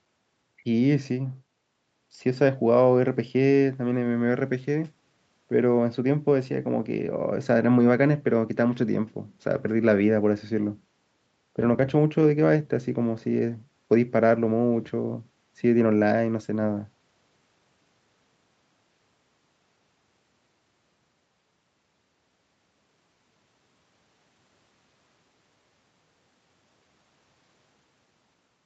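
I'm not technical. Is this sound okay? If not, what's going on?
Yes, there is no fault in this speech recording.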